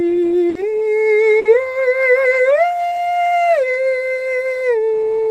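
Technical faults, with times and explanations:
0.49–0.58 s and 1.39–1.48 s, burst of packet loss: consecutive packets failed to arrive, so the receiver stretched and faded the last music for about 60 ms, then resumed 60 ms further on.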